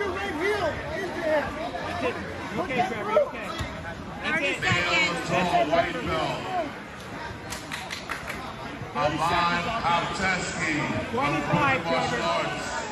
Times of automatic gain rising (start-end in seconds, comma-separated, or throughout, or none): none